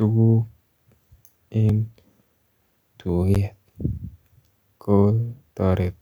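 At 1.69 s the speech drops out for about 2 ms in a block of digital silence. The sound cuts out and returns with no fade, so the hard edges read as a single tick. A longer block of digital silence follows at 3.35 s, lasting 11.6 ms. That length fits a 512-sample buffer that was not filled in time. Here too the gap is short enough to be heard as a tick or dip rather than a hole.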